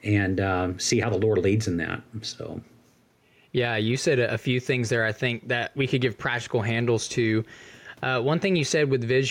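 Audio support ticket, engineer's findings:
Gain pumping throughout the speech. Gain ducks under every loud syllable, a swing of roughly 5 dB. Likely cause: input gain set far too high, with a fast limiter or compressor clamping each peak and releasing in the gaps. Loud and soft passages sit squashed close together. Unlike a noise gate, the background never cuts to silence. Room noise stays about 42 dB below the speech.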